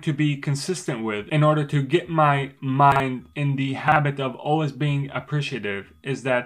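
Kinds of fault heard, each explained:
Chunks out of order: A 40 ms block of audio was delivered late and played one slot after its neighbour, so two adjacent blocks swap places. Nothing is missing. The sequence is wrong, and the three joins around the swap do not line up. It happens twice, at 2.92 to 3.0 s and at 3.88 to 3.96 s. Each time the sound jumbles for a moment.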